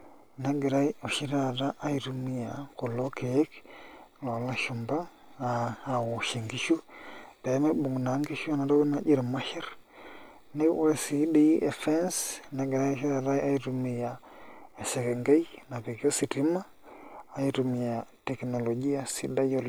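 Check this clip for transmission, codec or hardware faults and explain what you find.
No transmission, codec or hardware faults are audible anywhere in the speech.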